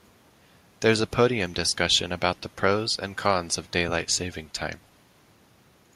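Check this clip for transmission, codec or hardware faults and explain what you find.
No faults found; nothing in the speech points to a problem anywhere in the signal chain.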